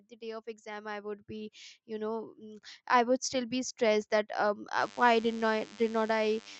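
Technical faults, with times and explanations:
0.08 to 3.86 s, automatic gain rising. The speech and the room sound grow louder together, by about 12 dB over nearly four seconds. The gain control judged the input too quiet and kept raising its gain step by step, so everything swells at once.
4.81 to 6.59 s, DECT cordless phone buzz. A thin, steady buzz sits under the speech, well below its level. It repeats at 100 Hz with many harmonics. A nearby cordless phone sends a radio burst every 10 ms, and the audio circuit rectifies each burst into a click.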